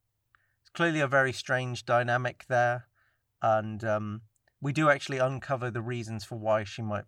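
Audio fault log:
No technical faults are present in this speech recording; the signal stays intact across the whole clip.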